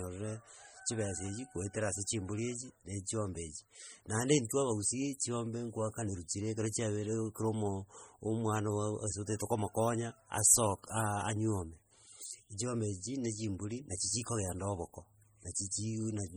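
Heavy MP3 compression runs throughout, likely at a bitrate near 32 kbps. Weak bands flicker between frames, giving a watery swirl and smeared consonants rather than a static filter's steady dullness.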